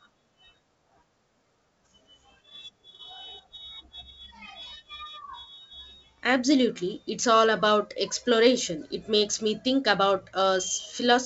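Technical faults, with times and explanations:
No technical faults can be heard in this speech clip. It carries G.722 wideband telephone coding at 64 kbit/s, which keeps the speech clear up to about 7 kHz, with any coding damage faint at most.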